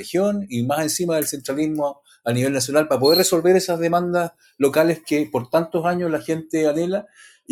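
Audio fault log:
Throughout: noise suppressor applied to music or sounds. A speech-tuned suppressor stays active across the whole clip. It treats steady parts of the sound as noise. Gain keeps shifting by about 5 dB, so held sound and tails pump and thin while onsets pass.
1.94–2.26 s, 4.3–4.6 s, 7.04–7.51 s: sound cut by the noise suppressor. In each window the suppressor judges the sound to be noise and pulls it down hard, by up to about 18 to 19 dB. Each dip lasts a few tenths of a second. Sustained or decaying sound sinks.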